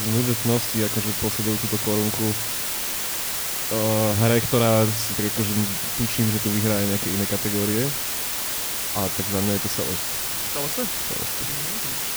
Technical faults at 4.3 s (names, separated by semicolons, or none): low bit depth with dither